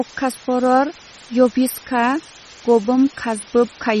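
From start to finish, the speech sits on a constant, even hiss from low bit depth with dither. The level points to roughly 6-bit resolution, with random dither added before rounding so the error becomes steady white noise about 20 dB below the signal rather than distortion. It never pumps or changes with the speech and fills the pauses equally. On a waveform the quiet gaps show a thick, fuzzy band instead of a flat line. A spectrogram shows an evenly spread noise floor under everything.

Also running through the whole clip is plainly audible codec damage with a watery, swirly quality. Consonant onsets sound smeared and s sounds carry metallic chirps. The likely cause is MP3 compression at a bitrate that fits around 32 kbps. With so few bits, the encoder drops weaker frequency components, which flicker in and out from frame to frame, and it cuts the treble above a fixed frequency. On a spectrogram there is a hard ceiling at 12.9 kHz, with patchy, blocky gaps below it that blink on and off over time.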